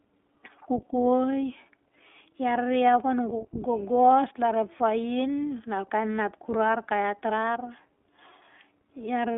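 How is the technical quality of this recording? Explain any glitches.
The recording is held back by one fault across the whole clip. iLBC codec coding throughout: the speech sits in a narrow 250 Hz to 3.5 kHz band with a plainly rough, synthetic edge, consistent with 20 ms frames coded independently at about 15 kbps. Unlike packet loss, nothing drops out; the roughness is steady.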